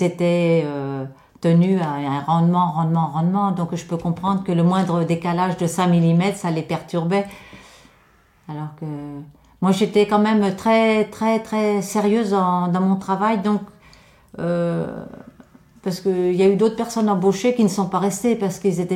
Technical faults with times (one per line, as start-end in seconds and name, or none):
none